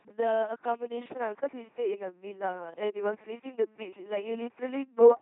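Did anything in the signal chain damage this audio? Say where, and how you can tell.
Yes. At the codec stage, the whole clip passes through an LPC-10 vocoder at 2.4 kbit/s, giving buzzy, robotic speech with heavy damage. Each frame is forced fully voiced or fully unvoiced. On a spectrogram, rigid pulse-train harmonics alternate with flat noise patches, and nothing appears above 3.8 kHz.

From 1.13 s to the end, the band narrows further to 3 kHz after a 20 ms gap. A faint new noise floor sits about 45 dB below the signal, with no level change. The likely cause is the input switching to a poorer device. The spectrogram shows the cutoff dropping abruptly, and the waveform shows a short flat gap.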